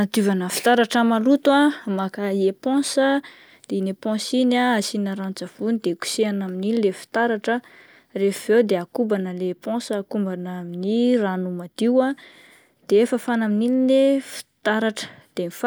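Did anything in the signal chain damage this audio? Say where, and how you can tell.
No, nothing in the chain has left a mark on this speech that I can hear, so there's no stage to point a finger at.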